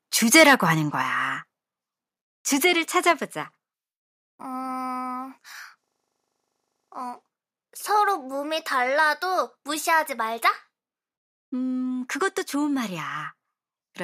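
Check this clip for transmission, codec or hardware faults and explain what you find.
Three kinds of fault are present: two microphone overloads, two steps down in microphone volume, and a system hang loop.

Microphone overload, 0.35 to 0.55 s and 3.09 to 3.11 s. Peaks drive past the converter's maximum, by about 7 dB in the first burst and about 1 dB in the second, so their tops are sliced flat, most likely because the microphone's input gain was set too high. The first event sounds harsh and crackly with a sizeable share of samples clipped. The second is a brief, slight rasp.

Microphone volume stepped down at 1.02 s and 3.12 s. Each follows an overload. The level of the voice and the background falls abruptly, by about 5 dB and then about 3 dB, with no fade. This is likely the call software reacting to the clipping by cutting the device's input gain in a single step, and it is heard as a sudden drop in level.

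System hang loop, 5.84 to 6.92 s. The same 40 ms slice of audio repeats exactly, around 27 times, at a rate of 25 per second. The machine or driver stalled while the sound hardware kept replaying its ring buffer, which fits a 40 ms buffer. The result is a steady buzz at 25 Hz lasting just over a second, after which the audio carries on.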